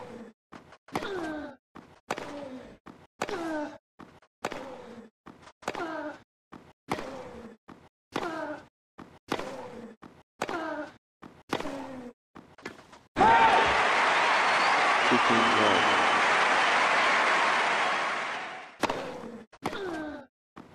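No technical faults can be heard anywhere in the audio.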